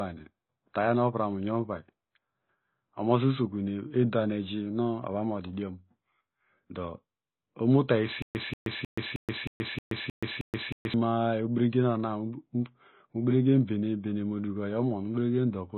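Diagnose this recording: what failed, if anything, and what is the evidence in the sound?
Throughout the clip, nothing survives above 4.1 kHz. The speech sounds dull and smeared. Sibilants carry a fizzy, warbling texture. This points to the codec stage. The damage is heavy and is likely AAC compression, with AAC-LC at a very low rate that fits about 16 kbps. Starved of bits, the encoder quantises its frequency lines coarsely against a hearing model. It discards the top band and leaves holes in what remains.

From 8.22 s to 10.94 s there is a stutter with silent gaps. A 186 ms burst plays, then 127 ms of digital silence follows. The pattern repeats every 313 ms, eight times in all. The fault sits at playback or streaming. The stream likely stalled. At each retry the player replayed its last fragment, then ran empty. The speech that belonged in that span is lost.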